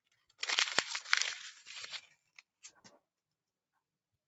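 A noise suppressor applied to music or sounds stays active for the whole clip. Built for speech, it treats the steady, sustained parts of these sounds as noise and keeps pulling them down. The resulting level swings of roughly 5 dB are heard as pumping, with held tones and decays sinking between onsets while sharp attacks come through largely intact. The top end stops near 8 kHz, which is the call path's bandwidth rather than part of this fault.

Sound cut by the noise suppressor appears three times. From 0.05 to 0.41 s, a sustained portion is turned down by as much as about 15 dB for around a fifth of a second in total, so it thins and briefly fades. From 2.07 to 2.43 s, the gain drops by up to about 16 dB across roughly a third of a second, so the sound sinks in level. From 2.61 to 2.81 s, a shorter dip of up to about 16 dB lasts roughly 150 ms.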